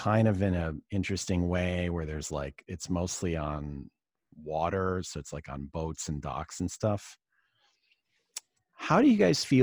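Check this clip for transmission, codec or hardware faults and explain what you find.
No faults turn up anywhere in this speech recording. There is nothing to report.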